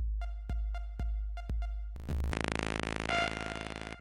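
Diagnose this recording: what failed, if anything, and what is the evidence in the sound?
At 2.32 s the sound turns duller and stays so: nothing above 10.9 kHz, faint new noise far below the signal, no gap or level jump. A spectrogram shows the top band ending abruptly there. Likely cause: input switched to a poorer device at the driver stage.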